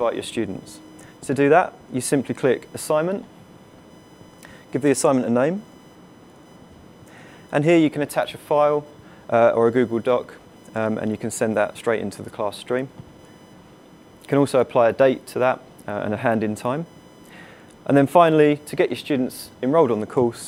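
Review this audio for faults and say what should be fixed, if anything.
USB whine runs through the whole clip: a fixed-pitch tone at 1 kHz with harmonics, strongest at 3 kHz, sitting roughly 40 dB below the audio. It comes from the bus's 1 ms frame current leaking through power or ground, and shows on a spectrogram as thin, unbroken horizontal lines at 1 kHz multiples. Power the interface from a clean supply or isolated hub, or add a USB ground-loop isolator.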